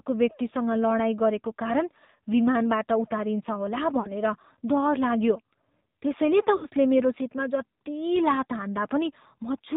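AMR narrowband mobile codec damage runs through the whole clip. The speech was squeezed into the 8 kHz-sampled mobile codec, so nothing above 4 kHz survives, and the voice is rebuilt from a vocal-tract model excited by sparse pulses rather than carried as a waveform. That coding loss is plainly audible as a buzzy, synthetic, boxed-in tone with dull sibilants, which fits one of the lower modes, around 7.4 kbps.

Lost AMR speech frames interrupt the audio at 4.00 to 4.13 s and again at 6.56 to 6.66 s. Each time, corrupted frames were rejected and the decoder filled the gap by repeating its last good pitch and spectral settings at falling gain. The first gap covers about 40 ms, which fits two missing 20 ms frames. It sounds like a short smeared warble and dip. The second covers about 60 ms, fitting three frames, and gives a longer drawn-out, fading sound before the voice comes back briefly thin and rough.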